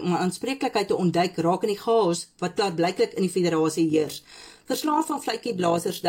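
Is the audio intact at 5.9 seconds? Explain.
No. Overlap-add ripple runs from 3.9 s to the end. Badly overlapped frames make the level pulse about 6 dB at roughly 50 Hz, giving a rough, fast flutter.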